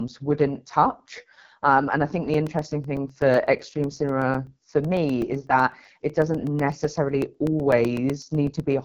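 Throughout, the AMR wideband (HD Voice) codec makes the speech raspy and rough, with nothing above 7.1 kHz, which fits its lowest 6.6 kbit/s mode rather than narrowband band-limiting. From 2.34 s, right after "and i think the", until 8.72 s, periodic USB or driver dropouts cut a couple of milliseconds to silence every 0.125 s, giving evenly spaced ticks, unlike random packet-loss gaps.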